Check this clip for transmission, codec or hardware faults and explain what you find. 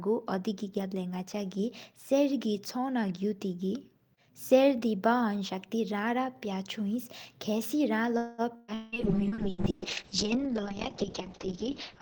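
Four network faults cluster around 8 to 9 seconds of this speech, and the last one lasts to the end.

At 8.17 to 8.41 s there is a call audio freeze. Packets were most likely held up in transit, so the jitter buffer ran dry and the receiver stretched the last sound for about 210 ms. That comes out as a fading buzz or hiss, after which the speech carries on with nothing lost but now running later.

At 8.56 to 8.71 s comes a burst of packet loss. About 120 ms of consecutive packets never arrived in time, and the receiver covered the hole by continuing and fading the previous sound. You hear a brief held buzz or hiss, then a jump forward past the missing audio.

At 8.74 to 8.95 s a long network dropout follows. No audio arrived for roughly 180 ms, likely from the link going dead for that stretch. Concealment again extends and fades the last sound, and the speech resumes further on with that portion gone.

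From 8.84 s to the end there is a call bitrate drop. The bandwidth estimate collapsed, and the encoder fell from 32 kbps to 6 kbps, with its audio bandwidth narrowed from 20 kHz to 6 kHz. The voice turns muffled, rough and watery and stays that way through the final three seconds.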